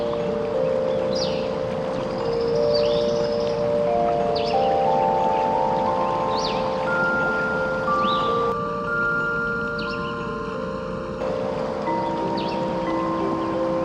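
From 8.52 to 11.21 s, one channel runs late by a fraction of a millisecond, about 0.7 ms, and the two are summed to mono. This is channel delay, heard as comb filtering. Content common to both channels cancels at evenly spaced frequencies, with the first notch around 700 Hz and further notches repeating up the spectrum. The sound turns hollow and phasey, with fixed notches that hold steady until the channels realign.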